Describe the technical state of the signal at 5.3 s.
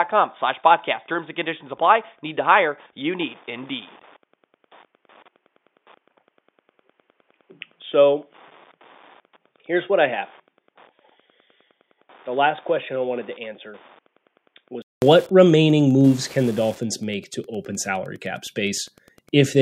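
At 5.3 s you're in a dull, narrowband stretch from 0 to 15.02 s, with nothing above 3.6 kHz and a bit quieter. That's likely an input switched to a poorer device, and it clears after a 200 ms gap just before "remaining moves can the". There's also Wi-Fi interference through the whole clip: a nearby radio's beacons get rectified every 102.4 ms, giving a ticking about ten times a second, well under the speech.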